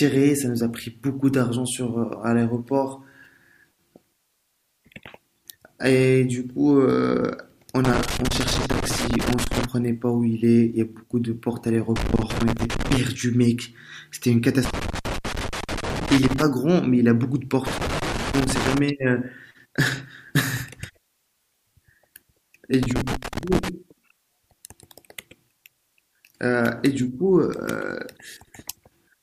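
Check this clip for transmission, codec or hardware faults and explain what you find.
A hardware fault recurs through this speech clip: loose connector crackle at 7.85–9.65, 11.96–12.97, 14.65–16.42, 17.67–18.78 and 22.83–23.69 s. A worn contact repeatedly breaks and remakes the circuit, chopping the signal into irregular scratchy bursts.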